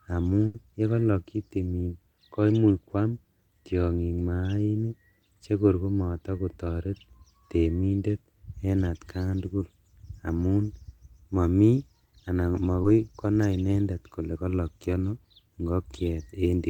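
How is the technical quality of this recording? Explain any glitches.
Three glitches, all from packets that arrived too late or not at all, interrupt the speech.

At 0.46 to 0.55 s a burst of packet loss leaves about 80 ms missing. The receiver stretched the last sound and faded it. On a spectrogram this shows as smeared, decaying bands before the audio jumps ahead.

Short concealed packet loss appears at 9.49 to 9.51 s and 12.82 to 12.85 s, just after "momi anan", lasting about 10 and 20 ms. Extrapolated filler blends back in, heard as a brief smear or wobble and visible as a blurred vertical sliver.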